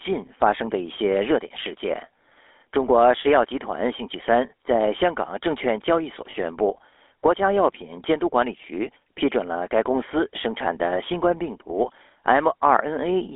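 Throughout, the speech carries GSM full-rate codec damage: plainly audible buzzy, gravelly roughness from pulse-driven vocal-tract modelling, consistent with 13 kbit/s coding. A spectrogram shows energy confined to roughly 300 Hz to 3.5 kHz, with a coarse, smeared harmonic structure.

From 6.30 to 6.35 s, lost GSM frames were concealed by repeating the last good frame. This is heard as a brief rough, metallic ring, which fits about two missing 20 ms frames. The waveform shows a short held stretch, and the spectrogram shows frozen, repeated bands.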